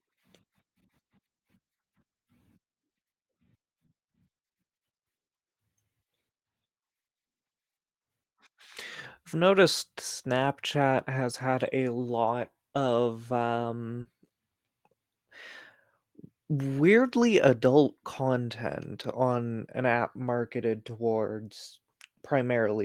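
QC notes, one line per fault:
14.01–14.07 s, short concealed packet loss: a brief smear and wobble in the speech, with a short sound possibly lost. About 40 ms of audio arrived too late to decode, so the receiver extended the preceding sound to fill the gap before blending back into the real signal.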